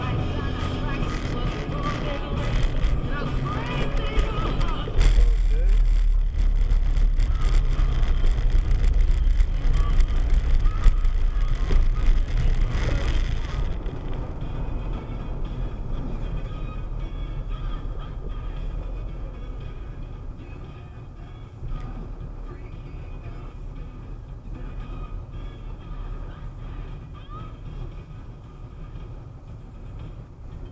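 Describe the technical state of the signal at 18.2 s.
At 18.2 s the signal is intact, with no audible dropout, distortion, noise or other fault at that moment.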